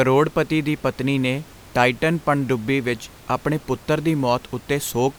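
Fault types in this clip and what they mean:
There are no fault types in this clip.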